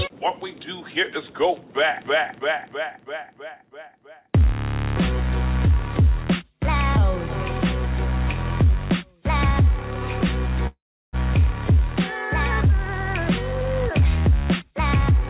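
Carried over a call link whose codec shows no content above 4 kHz, the audio stalls from 10.67 to 11.16 s: the last sound stretches out and fades, then about 0.34 s of silence, before resuming exactly where it stopped. This is a call audio freeze, likely from delayed packets emptying the jitter buffer. From 14.19 to 15.15 s the sound runs hurried at unchanged pitch, about 118% speed, as a jitter buffer speed-up trims roughly a fifth of a second of pitch-period slices to shed the built-up delay.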